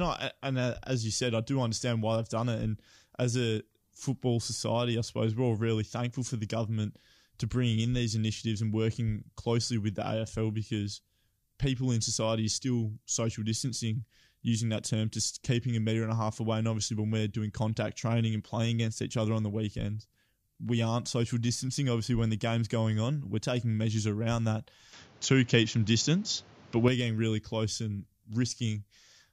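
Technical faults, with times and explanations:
24.93 to 26.88 s, input switched to a poorer device: right after "taking measures around that" the sound suddenly narrows, with nothing above 7.3 kHz, so it goes duller and a bit boxy. The level shifts by around 5 dB and a new noise floor comes in, roughly 30 dB under the speech. There's no gap at the change, and the fuller sound is back by "getting really close and", most likely from the recording briefly jumping to a different, lower-grade microphone.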